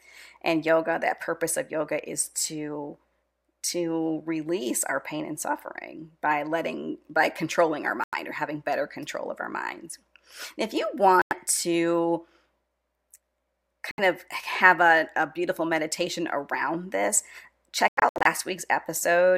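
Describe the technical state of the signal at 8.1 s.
Bluetooth dropout from 8.04 to 8.14 s: the speech cuts to silence, then resumes further along, likely because late packets were dropped before reaching the headphones.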